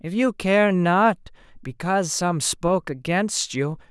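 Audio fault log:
No technical fault can be heard anywhere in this speech recording. Nothing in it calls for an entry in the log.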